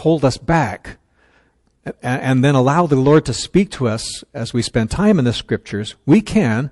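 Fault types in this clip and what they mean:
MP3 compression: Plainly audible codec damage runs through the whole speech clip. The sound has a watery, swirling quality. Weak frequency detail flickers in and out from frame to frame, and s sounds turn metallic and chirpy. Consonant attacks smear rather than land cleanly. The likely cause is MP3 encoding at a low rate. The amount of damage fits a bitrate of around 48 kbps, where the encoder runs short of bits.
Pre-echo: A short burst of hiss comes just before a sharp attack, from 4.88 to 4.91 s. It spreads across about 24 ms and rises about 13 dB above the quiet moment it fills. The encoder spreads its quantisation noise over a whole block. Noise sized for the loud attack therefore leaks backward into the silence ahead of it. The spread fits a 48 ms transform window that never switched to short blocks. The attack itself sounds softened.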